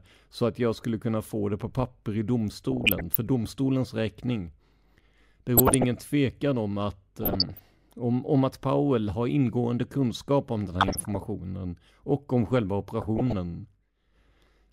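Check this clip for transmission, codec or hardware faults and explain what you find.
The clip has one recurring fault: DAB burbling, heard five times in this speech recording at 2.72–3.15 s, 5.57–5.84 s (just before "tvekan om att"), 7.19–7.66 s (between "tvekan om att" and "om om att"), 10.81–11.17 s (right after "kunskap om den här") and 13.01–13.33 s.

Under weak reception, residual bit errors at a rate below one percent slip past error correction and corrupt MP2 samples and scale factors, so single sub-bands jump in level for up to a frame. The result is short blips of noise over the speech. On a spectrogram it shows as scattered bright rectangular tiles, each confined to one frequency band and one short frame. The waveform shows small irregular bursts.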